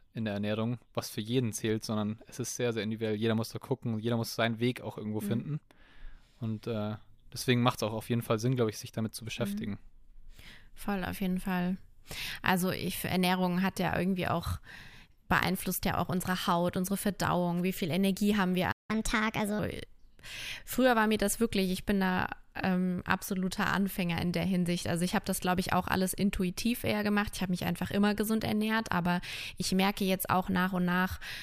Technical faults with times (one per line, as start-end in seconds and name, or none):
18.71-18.90 playback stall
18.90-19.59 catch-up at higher speed